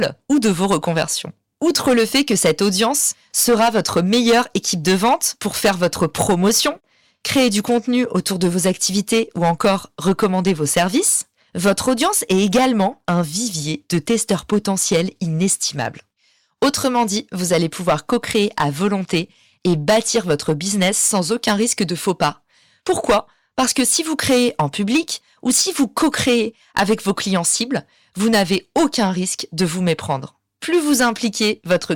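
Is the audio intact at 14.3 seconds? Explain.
No. Hard clipping runs through the whole speech recording, including 14.3 s. Driven about 13 dB past the limit, a few percent of samples hit the ceiling, so peaks are sliced flat into harsh fuzz. The waveform shows squared-off tops; the spectrogram shows high-frequency smearing.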